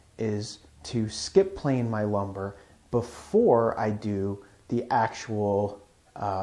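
No technical fault can be heard anywhere in the audio, which keeps a steady, unbroken signal throughout.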